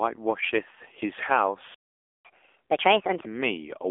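From the start, the speech sounds thin, boxy and buzzy, with nothing above 3.6 kHz. This is the AMR narrowband mobile codec, whose sparse pulse model at a low rate, which fits the 7.4 kbps mode, leaves plainly audible damage. At 1.74 s the sound cuts out mid-flow and stays silent until 2.25 s, about half a second. This is a playback stall, likely the player running short of data or being blocked before resuming.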